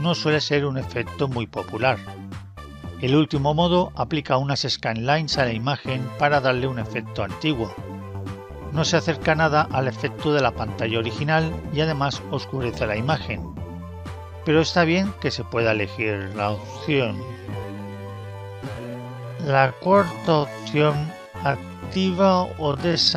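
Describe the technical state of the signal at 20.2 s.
At 20.2 s the audio sits inside a time-stretched section running from 16.00 s to the end, slowed to 0.53 times its pace with pitch held, likely by software repeating short slices. It drags. A spectrogram shows unchanged harmonic frequencies but stretched timing.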